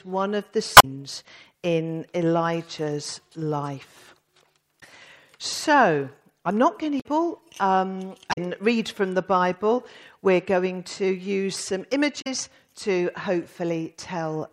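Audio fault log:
0.76–0.85, 4.77–4.83, 6.97–7.06, 8.29–8.38 and 12.18–12.27 s: damaged data in a compressed stream. Each event is a short fault of about 60 to 90 ms, heard as a chirp, squawk, click or short hole. Corrupted bytes reach the decoder, which misreads or refuses the frames there before it regains frame sync. This is a decoding error rather than a single-sample tick.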